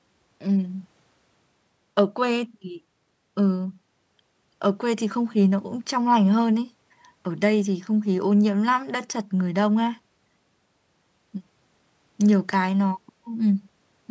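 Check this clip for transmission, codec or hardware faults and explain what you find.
No faults found here.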